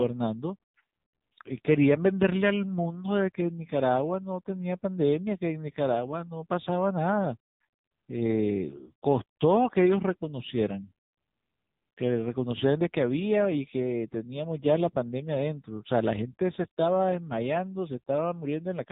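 Speech that has passed through the AMR narrowband mobile codec at a low mode, with the heavy degradation pointing to a bitrate around 6.7 kbps. The phone-band encoder discards everything above about 3.8 kHz, so sibilants and breath lose their top end for the whole clip. With so few bits to describe each 20 ms frame, the vocal-tract model is driven by sparse pulses, which makes the voice sound buzzy, thin and distinctly synthetic throughout.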